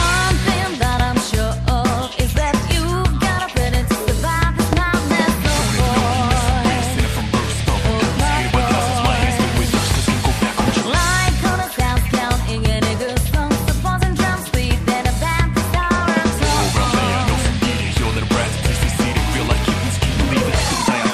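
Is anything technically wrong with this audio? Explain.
Yes, there's one loud pop, at 4.73 to 4.75 s. It's a single sharp pop jumping well above the surrounding level, with the sound carrying on underneath. It's likely a voltage spike from a plug, switch, static or driver glitch that got into the signal path.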